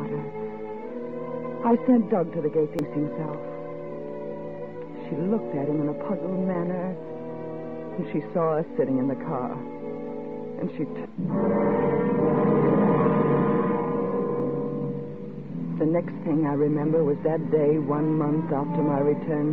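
Four brief glitches break into the audio, at 2.79 to 2.83 s, 7.94 to 8.00 s, 11.01 to 11.07 s and 14.40 to 14.45 s, each lasting 44 to 60 ms. They come from damaged data in a compressed stream. Corrupted bytes in the encoded file leave the decoder misreading or refusing frames. It loses sync briefly before finding the next valid frame header and regaining sync.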